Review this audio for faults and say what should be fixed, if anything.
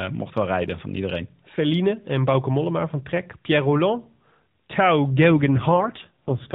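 An AMR rate drop runs from 5.30 s to the end at 6.55 s. Fewer bits go to the voice, so the speech turns rougher and more synthetic. This fits a step from 12.2 to 4.75 kbps. A stronger radio link would prevent it.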